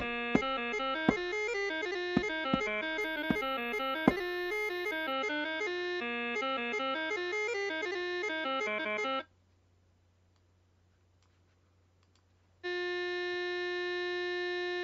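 Imaging from linear upsampling appears between 3.01 and 5.13 s. Straight-line interpolation, consistent with a 16 kHz source raised to 48 kHz, dulls the top and leaves faint 8–16 kHz mirror images, roughly 30 dB down.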